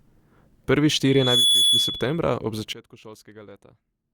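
At 1.06 s a loudspeaker feedback squeal begins: the microphone is picking up its own loudspeaker, and at 3.4 kHz the loop gain tops unity. That tone grows over a few tenths of a second into a piercing whistle, somewhat louder than the speech, until it stops at 2.19 s.

At 2.73 s a sudden gain jump occurs, likely a digital gain setting applied without a ramp. From that point to the end, the speech and its background noise drop together, instantly, by 20 dB.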